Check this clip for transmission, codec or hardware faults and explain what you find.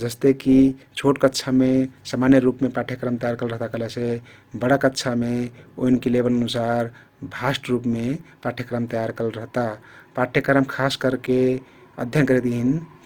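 One fault runs through the whole clip: the speech carries plainly audible damage that is most likely from Opus compression in its CELT music mode, at a rate that sounds low, in the region of 24 kbps. With bits scarce, the encoder keeps each band's energy but refills detail with folded copies of lower bands or noise, so voiced sounds come out grainy and rough rather than swirly. The band stays full, reaching about 20.2 kHz. A spectrogram would show harmonics smeared into speckled noise texture, with few empty holes.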